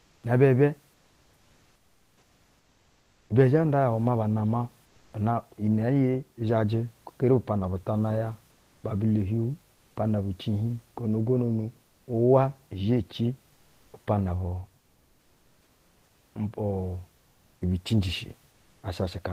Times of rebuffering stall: none

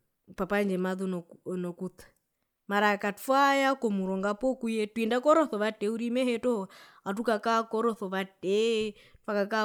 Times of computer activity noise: none

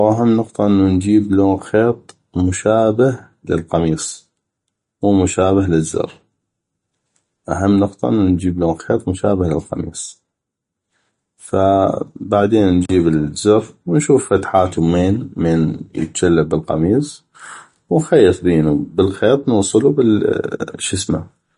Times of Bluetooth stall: none

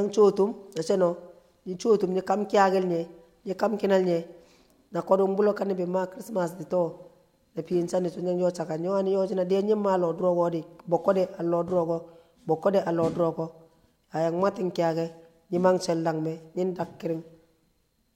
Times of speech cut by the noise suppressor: none

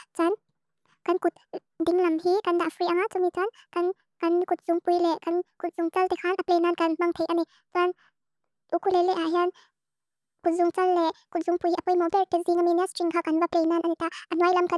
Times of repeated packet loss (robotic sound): none

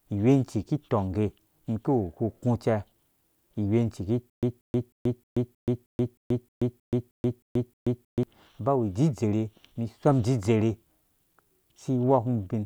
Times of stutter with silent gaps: 4.30-8.23

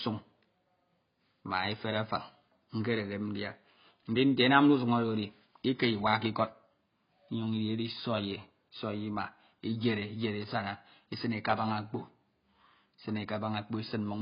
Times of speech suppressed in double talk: none

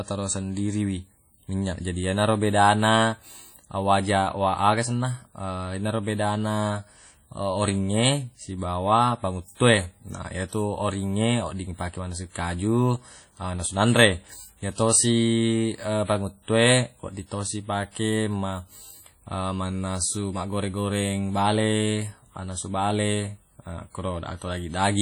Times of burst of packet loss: none

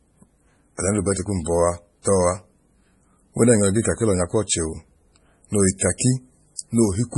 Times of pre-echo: 0.77, 5.98-6.00, 6.56-6.59

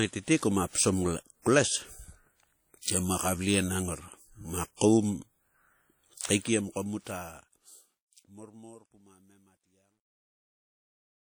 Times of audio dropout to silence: none

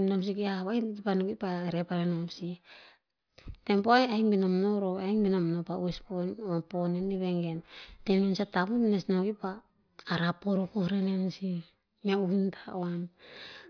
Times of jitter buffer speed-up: none

